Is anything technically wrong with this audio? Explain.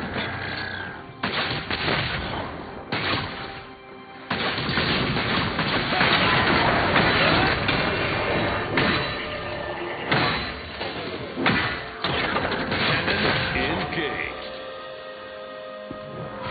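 No, nothing technically wrong can be heard anywhere in this audio.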